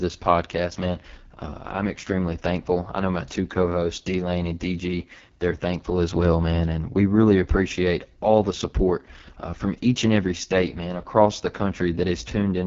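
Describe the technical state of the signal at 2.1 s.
At 2.1 s, as throughout, the speech carries heavy AMR wideband (HD Voice) codec damage that fits the lowest 6.6 kbit/s mode. The pulse-driven vocal model sounds rough and raspy, and the spectrogram shows a smeared noisy band above 6.4 kHz and nothing above 7.3 kHz.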